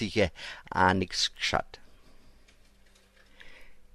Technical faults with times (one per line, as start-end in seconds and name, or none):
1.36 bit error spike